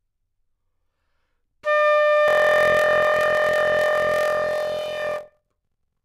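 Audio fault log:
2.26 to 6.04 s, block size mismatch (padded): zero-filled gaps in each block produce a 43.1 Hz buzz, consistent with 1024-sample reads, and the sound runs at 0.861 speed. Pitch stays about normal, unlike a sample-rate error, which would shift pitch with speed.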